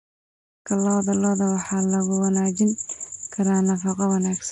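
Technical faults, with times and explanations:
Throughout, Nellymoser compression: the speech carries a rough, hissy halo and a smeared, underwater quality that is plainly audible. This is likely Nellymoser Asao, at a rate that fits about 44 kbps. Each short block gets the same fixed bit budget, so weaker bands are replaced with noise rather than dropped. That noise fill is what sets it apart from an ordinary low-pass. The band still stops sharply at 10.6 kHz, and the smooth fade-in ending at 0.68 s carries the same haze.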